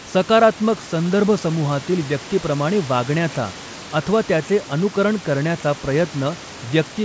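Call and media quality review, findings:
No faults found: the speech is band-limited to 8 kHz, which fits a wideband call codec such as G.722 after normal call microphone processing, and the room noise sits about 21 dB below the speech.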